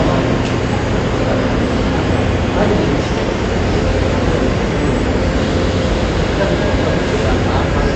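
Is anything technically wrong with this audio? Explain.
Yes. AAC compression, throughout: likely AAC-LC quantising the spectrum coarsely at a rate fitting 32 kbps, so nothing sounds above 8.5 kHz; the audio is dull and smeared.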